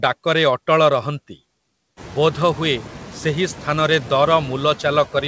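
Throughout the speech, noise suppressor artifacts are audible: the processing pulls steady noise down by about 12 dB, frame by frame, so it sinks between words and swells back underneath them. A gate would cut noise off abruptly, but here the floor breathes, most clearly after the room noise rises around 2 s.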